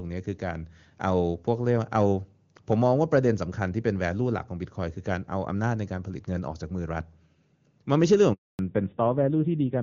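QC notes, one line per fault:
8.33 to 8.59 s, handover gap: 260 ms of dead silence as the call switches networks; the waveform drops to a flat line, spectrogram shows a blank vertical band.
8.59 s to end, fallback to narrowband: call drops from HD Voice to a narrowband codec that likely runs near 7.4 kbit/s; spectrogram is empty above 4 kHz, sound turns duller and rougher.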